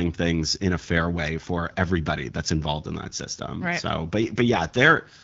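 The network forced an AMR rate drop at 4.22 s, lasting to the end at 5.23 s, in this speech clip carried over an AMR wideband (HD Voice) codec. Its sound up to that point fits 12.65 kbit/s. At the drop the bandwidth and continuity hold but the speech turns rough, raspy and synthetic, which fits a switch down to the 6.6 kbit/s mode.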